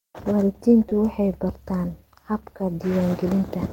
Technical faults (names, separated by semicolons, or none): short concealed packet loss